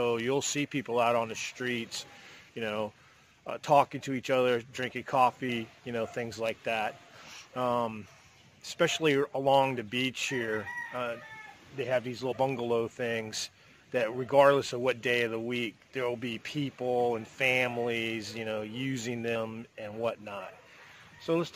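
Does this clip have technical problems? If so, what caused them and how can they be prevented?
Yes. Compressed frames skipped occurs three times: at 5.48 s, from 12.31 to 12.33 s, and at 19.35 s. At each point, whole frames of the encoded stream are never decoded, either because they are missing from the file or because the decoder rejected them as corrupt. The sound jumps forward by about 150 ms, 100 ms and 150 ms respectively, which fits a run of frames roughly 23 ms long. The join is heard as a brief discontinuity. To prevent this, verify file integrity with checksums after transfer and storage, and use a container or transport with error detection and retransmission.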